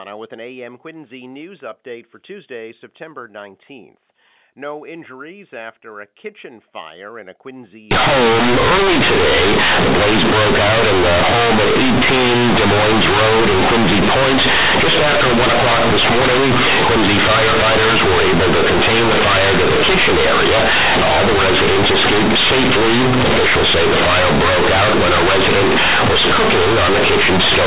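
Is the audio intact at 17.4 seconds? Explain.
No. From 7.91 s to the end, the speech suffers companded audio read as linear. A-law bytes are played as plain 8-bit samples without expansion. Each sign change swings the output widely, so quiet passages become as loud as peaks. The result is very loud, buzzy distortion with harsh noise filling the pauses.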